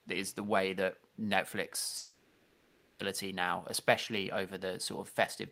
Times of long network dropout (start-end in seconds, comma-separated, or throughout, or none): 1.97-3.01